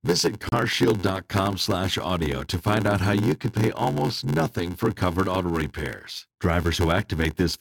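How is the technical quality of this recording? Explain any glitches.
The recording has two technical problems, one continuous and one brief.

A block size mismatch (padded) runs throughout. Short blocks are zero-filled to a size that fits 512 samples, producing an 86.1 Hz buzz and speech slowed to 0.861 speed with its timbre unchanged.

A Bluetooth stall occurs at 0.49–0.52 s. The sound drops to silence for 32 ms, likely because the headphone buffer emptied while delayed packets were resent.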